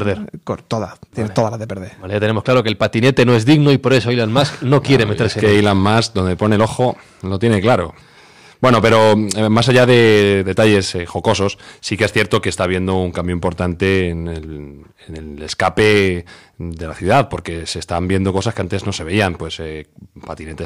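Hard clipping runs through the whole recording: the speech was driven about 8 dB beyond what some stage in the chain could pass, so every peak that crossed the ceiling was sliced flat. Only a small share of samples, somewhere around one or two percent, actually hit that limit, but each flattened top sprays harmonics high into the spectrum. On the loudest moments this comes through as a gritty crackle and rasp riding on the voice from start to finish.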